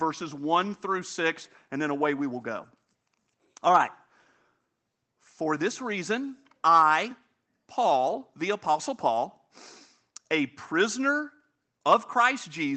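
Nothing here counts as a fault: the speech simply comes through a call path that's working as it should, with the usual codec colouring and the high end topping out around 8 kHz.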